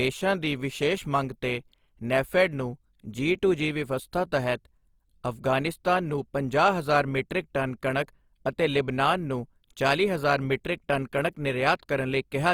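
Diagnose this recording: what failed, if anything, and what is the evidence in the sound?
The codec is where this one went wrong. Across the whole clip the speech has a rough, grainy texture, with little swirl and nothing above 20.2 kHz, which fits Opus compression in music mode at around 24 kbps. When bits run short, the encoder likely keeps band energy but fills the detail with folded or noisy content.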